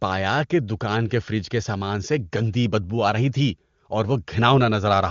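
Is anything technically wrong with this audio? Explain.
No, there are no technical faults: this is speech carried over the AMR wideband (HD Voice) codec at 23.85 kbit/s, its top rate, where any coding damage is faint at most.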